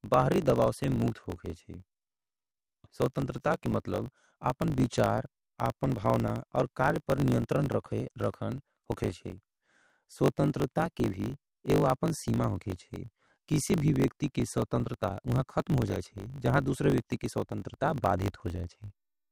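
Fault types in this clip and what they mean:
Block size mismatch (truncated): one stage writes longer blocks than the next reads, so each block's tail is discarded. Throughout this speech, a steady buzz sits at about 50 Hz, the block rate, which fits blocks of 1024 samples. The speech runs about 1.07 times fast at roughly normal pitch. A sample-rate mismatch would shift the pitch along with the speed, and plain dropouts would leave audible gaps rather than a regular buzz.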